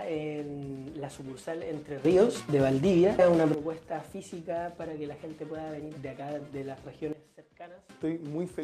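At 2.05 s the level jumps up by about 12 dB, and it drops back at 3.54 s. At 7.13 s it falls by about 14 dB until 7.89 s. Sound and background noise move together. A sudden gain jump, likely a gain change applied without a ramp, fits both.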